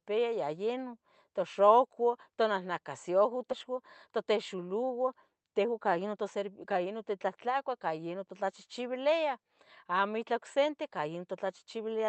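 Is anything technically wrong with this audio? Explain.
Yes, two faults in this speech clip. At 3.51 s there's a skip ahead: roughly 0.7 s was dropped, so the speech jumps forward and the two sides join almost seamlessly. Right after, from 3.7 to 6.2 s, a jitter buffer speed-up trims tiny pitch-period chunks to work off the extra delay, running the speech about 8% fast at unchanged pitch, so it sounds a bit hurried. Underneath it all, the call codec's top end stops around 8 kHz.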